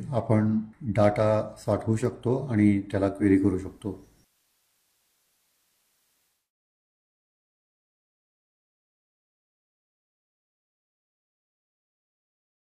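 The audio contains one fault, digital radio blending to analogue, from 3.06 s to 6.52 s. A hybrid receiver lost its digital stream and cross-faded over about 257 ms to the FM analogue broadcast of the same station, then faded back. FM adds hiss, here roughly 40 dB below the signal, with no change in level. On a spectrogram, a broadband noise floor rises over a quarter second at 3.06 s and falls away after 6.52 s. The waveform envelope shows no step at either blend.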